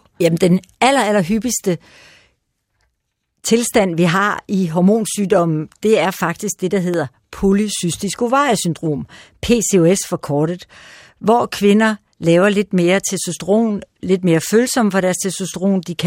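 At 6.94 to 6.96 s, between "er faktisk det der" and "polycystisk ovariesyndrom", a single loud pop jumps roughly 10 dB above the speech, which continues underneath. Likely a brief voltage pulse, it appears as a sharp waveform spike and a thin full-height spectrogram line.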